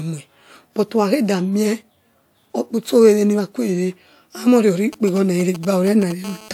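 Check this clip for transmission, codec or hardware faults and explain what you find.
Two bits of radio interference from a 2G phone show up near the end of the speech, one right after the other.

From 4.93 to 6.12 s there are GSM signalling bursts. A nearby handset is sending short clusters of transmissions, and the audio circuitry rectifies them. You hear a galloping dit-dit-dit of brief 217 Hz buzzes, sitting somewhere around 15 dB under the speech.

Then from 6.24 to 6.49 s comes GSM phone buzz. The phone is transmitting continuously as in a call, pulsing 217 times a second, and the rectified pulses turn into a hard, raspy 217 Hz buzz full of harmonics. It has nothing to do with the speech and sits about 20 dB below it.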